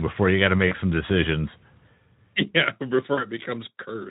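A speech recording carried over a Speex link shows VoIP packet loss concealed by the speech codec at two points: 0.67 to 0.78 s, just after "before you got to", and 3.13 to 3.26 s. Each time about 40 ms of audio is missing, which fits two lost 20 ms frames. The decoder carries its last pitch and filter forward at falling gain, so the sound smears into a fading buzzy tone or coloured noise and stays weak briefly after packets resume.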